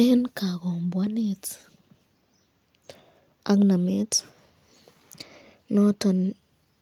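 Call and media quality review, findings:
No faults detected in this speech recording.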